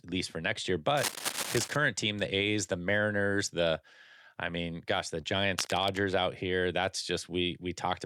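From 0.95 to 1.76 s, just after "least for next year", a dense scratching and rustling runs over the speech nearly as loud as it, cable scratch noise, likely from a worn cable or connector being moved. At 5.21 to 5.25 s, after "I mean gosh the", a brief smear marks short concealed packet loss: about 20 ms of audio never arrived, and the receiver extended the preceding sound to bridge the gap. A second, quieter burst of the same cable scratch noise follows from 5.59 to 5.98 s, ending before "out here".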